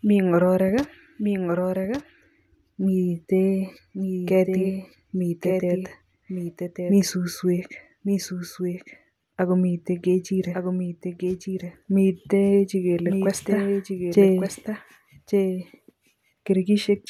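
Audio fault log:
Throughout: doubled audio track. Every phrase of the speech returns about a second later as a second full-band copy, roughly 5 dB below the original, so each sentence overlaps the one before it. The repeat has no decay, reverberant tail or room colouring, which rules out an acoustic echo. It points to the same signal being mixed in twice, likely through a second, slower capture path or an edit that left two copies out of alignment.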